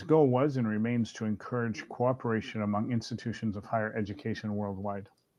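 Nothing stood out as a technical problem on listening to this speech recording.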